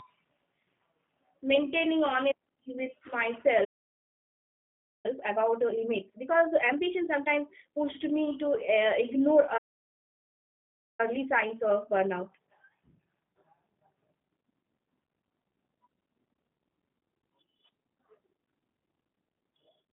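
Speech runs through a G.729 codec for the whole clip: band-limited to roughly 150 Hz to 3.5 kHz, with nothing above 4 kHz, and a rough, synthetic texture consistent with an 8 kbit/s vocal-tract model. The output drops to silence for about 1.4 s from 3.64 to 5.06 s and again from 9.57 to 11.00 s, likely a playback stall from buffer underrun or a blocked thread. Each stall is followed by time-compressed catch-up that hurries the speech at unchanged pitch, at 1.5x from 5.06 to 7.84 s and at 1.25x from 11.00 to 14.00 s, as the player works off its backlog.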